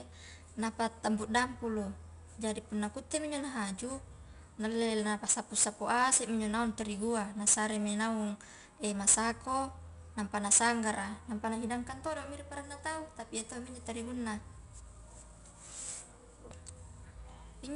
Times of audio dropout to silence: none

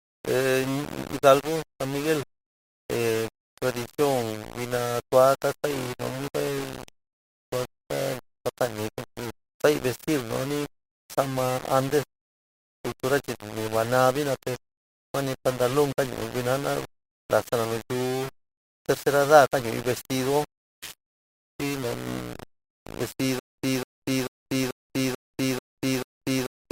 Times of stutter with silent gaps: 23.39-26.71

